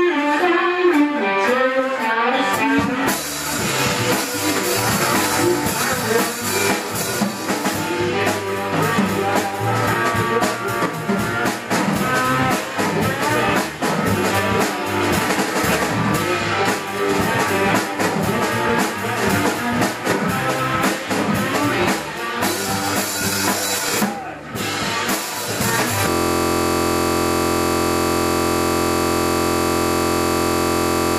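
At 26.1 s the audio locks into a system hang loop that runs to the end of the clip. One 23.22 ms slice of sound repeats exactly, over two hundred times. The loop rate is 43.1 Hz, so it comes across as a steady buzz. The computer or its audio driver stopped supplying new data, but the sound hardware kept replaying the same ring buffer. The loop length fits a 1024-sample buffer.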